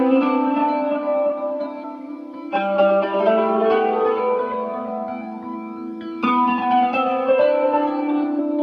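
The audio jumps forward twice, at 1.83 to 1.85 s and again at 8.38 s, each time losing about a fifth of a second of material. These are compressed frames skipped: whole frames were missing or rejected by the decoder, so playback resumes further on, which points to roughly ten and roughly seven frames lost. A spectrogram shows an abrupt content discontinuity; the waveform shows a sudden envelope change.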